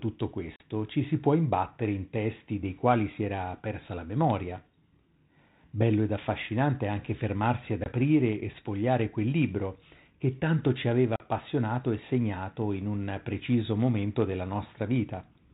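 Packet loss on an ADPCM call at 0.56 s (about 40 ms, before "ci si può imbattere"), 7.84 s (20 ms, between "affascinante anche fermarsi ad" and "e sfogliare quel libro") and 11.16 s (40 ms, after "che tanto ci aveva"). Each drop becomes a hard-edged silent hole, and the decoder's adaptive predictor and step size lose step with the sender's. The speech then returns slightly distorted and settles within tens of milliseconds.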